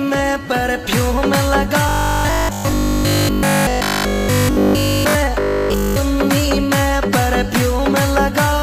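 From 1.89 to 5.15 s, and again from 5.40 to 5.96 s, the sound collapses into a rigid, metallic buzz pitched at 50 Hz: robotic sound from repeated short buffers. The likely cause is audio arriving too seldom, so the software keeps replaying the last chunk, and essentially all of each stretch is repeats. A 50 Hz buzz fits a 20 ms chunk looping while the real audio underneath gets skipped.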